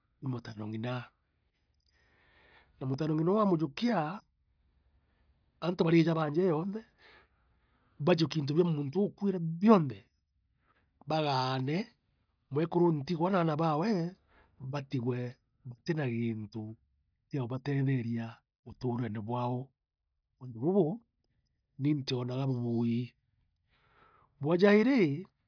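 A speech recording with no technical faults to be heard. Nothing in it calls for a time or a cause to be given.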